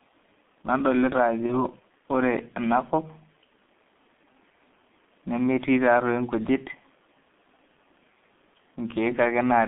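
From start to finish the speech carries the sound of the G.723.1 codec, heavily damaged. The band runs only from about 200 Hz to 3.5 kHz, so the top end is gone and the voice sounds muffled and boxy. The coarse, hoarse texture and smeared consonants fit a low rate near 6.3 kbit/s: the codec rebuilds each 30 ms frame from a crude voice model that cannot track fast changes, so detail between updates is lost.

At 1.46 s there is VoIP packet loss concealed by the speech codec. The audio briefly turns into a stretched buzzy tone or coloured noise that weakens rather than cutting to silence, which points to a single lost 30 ms frame. The decoder filled the gap by repeating its last pitch and filter at falling gain. Because each following frame is decoded from that guessed state, the speech stays thin and distorted until about 1.65 s.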